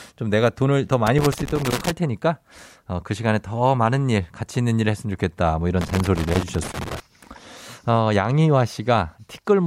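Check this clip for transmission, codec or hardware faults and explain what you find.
Loose connector crackle, a hardware fault, appears twice in this speech clip: from 1.07 to 1.91 s and from 5.81 to 7.00 s. A worn or dirty contact intermittently opens and closes, chopping the signal. Both passages sound like irregular bursts of scratchy crackle.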